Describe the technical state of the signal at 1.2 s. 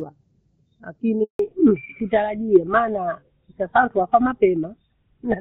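A handover gap begins just after this point: the call was passed from one network link to another, and no speech frames reached the receiver from 1.23 s to 1.39 s. At 1.2 s the speech is still running normally through the wideband codec, but within a few tens of milliseconds it fades out to silence for about 160 ms until the new link starts delivering audio, and whatever was said during that window is lost.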